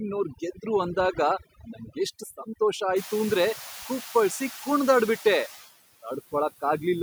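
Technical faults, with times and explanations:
Throughout, overdone noise removal: the background drops and breaks up into twinkling specks. The noise reduction was set too strong, so bands lying close to its noise estimate are pushed far down or off, taking quieter parts of the speech with them.
Throughout, noise suppressor artifacts: residual noise dips between phrases and swells back under the speech. Each frame, the suppressor pulls down bands it judges to be steady noise, here by about 8 dB.
1.6–1.97 s, speech cut by the noise suppressor: right after "ಗೆದ್ರು ಅಂದಾಗ", brief stretches of speech, about a tenth of a second in all, sound swallowed and faint, dropping by up to about 11 dB. The suppressor mistook these quiet speech sounds for background noise and lowered them along with it.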